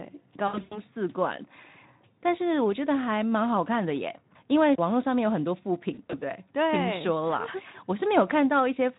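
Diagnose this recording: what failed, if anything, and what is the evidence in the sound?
Speech twice smears into a buzzy, fading tone, at 0.47 to 0.81 s and 5.93 to 6.23 s, and stays weak briefly afterwards. This is VoIP packet loss concealed by the speech codec: the network dropped packets, up to 100 ms at once, and the Speex decoder extrapolated its last pitch and filter with falling gain.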